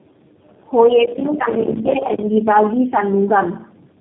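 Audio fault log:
throughout: tandem speech coding. The speech has passed through three low-rate speech codecs in turn, consistent with AMR-NB, AMR-NB again and finally G.729A, each re-encoding the previous decoder's output. The damage compounds, leaving a rough, muffled, warbly sound with nothing above 3.7 kHz.
1.05 to 2.23 s: processor overload crackle. For just over a second, processing falls behind and misses deadline after deadline, around a hundred times, which fits a buffer of about 5 ms. Each missed buffer drops out to silence with hard edges, so the gaps merge into gritty crackle that stops when the load eases.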